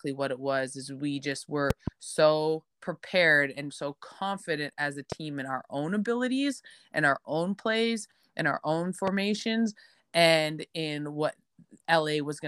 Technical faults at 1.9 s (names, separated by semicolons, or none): loud pop